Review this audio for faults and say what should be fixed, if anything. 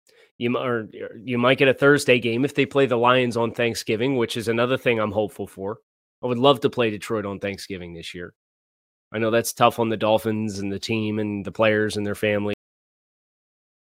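Cut-off end at 12.54 s: just after "the players and their", the speech stops mid-sound and falls straight to digital silence, because the final buffers were never written. To prevent it, flush and write all remaining buffers before closing the file or stopping playback.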